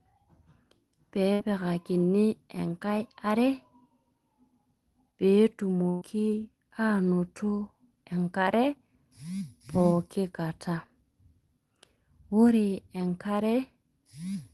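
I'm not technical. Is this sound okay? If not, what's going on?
No, not quite. At 1.33 to 1.42 s and 5.89 to 6.04 s there's a burst of packet loss: chunks of the call went missing, so the last sound smears briefly before the speech skips ahead.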